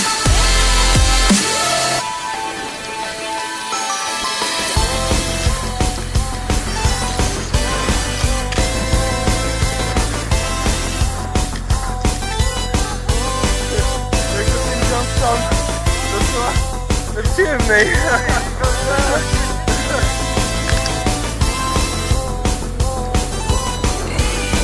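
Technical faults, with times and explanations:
No technical faults are audible anywhere in the clip, and the signal holds steady from beginning to end.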